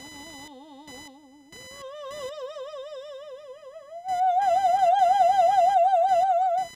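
Right from the start and running through the whole music clip there's computer activity noise: a thin buzzing chirp pulsing at around 1 kHz, sitting something like 25 dB under the music. It doesn't follow the playing at all. It tracks what the machine is doing, because shifting load on the processor, graphics card or mouse is pushing current around the ground the audio circuit shares, and that wobble lands straight in the signal.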